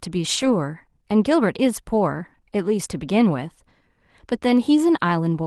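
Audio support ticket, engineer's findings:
Rough, noisier patch 0.37 to 0.51 s: lost packet rebuilt from error correction. Opus decoder played the low-bitrate FEC copies, about 80 ms, which points to four lost packets. No gap.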